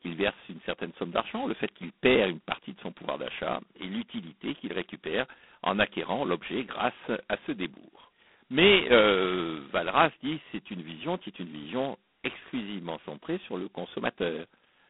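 From start to finish the speech carries heavy G.726 ADPCM damage. The harsh, rasping hiss rises and falls with the speech level, which fits the codec's lowest 16 kbit/s mode, where each sample keeps only two bits of difference from an adaptive prediction and the quantisation error stays large. The sound is confined to a telephone band of roughly 200 Hz to 3.5 kHz, and nothing passes above 3.8 kHz.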